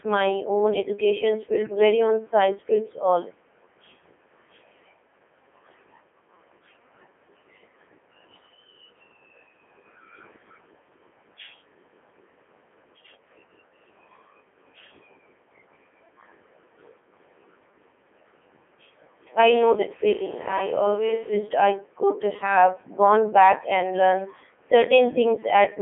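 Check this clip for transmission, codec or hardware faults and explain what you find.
One codec fault runs through the whole clip. Throughout, the speech sounds robotic and buzzy, confined to about 250 Hz to 3.4 kHz with nothing above 3.6 kHz. This is the Codec 2 vocoder, rebuilding the voice from pitch and spectral envelope instead of the waveform, and the heavy damage fits its 3.2 kbit/s mode.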